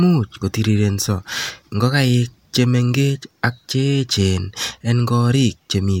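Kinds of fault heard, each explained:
No technical faults can be heard anywhere in the recording.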